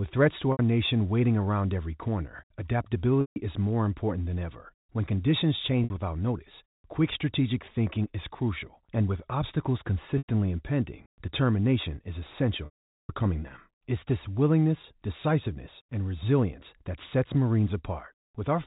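Speech, carried over a G.711 telephone path with nothing above 4 kHz, with packet loss with pitch repetition at 0.52 s (after "threats to"), 3.21 s (before "is more important than"), 5.84 s, 10.18 s (after "crucial and with obstacles") and 12.65 to 13.09 s. The receiver repeats the last pitch period to bridge each gap. The 60 to 150 ms losses come out as a briefly held, buzzy tone. The 440 ms loss fades to silence before the speech cross-fades back in.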